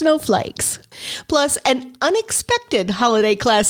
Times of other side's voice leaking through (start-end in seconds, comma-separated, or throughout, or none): none